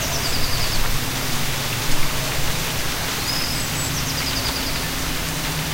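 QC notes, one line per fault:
No faults found in this recording of sounds. Nothing here needs a QC entry.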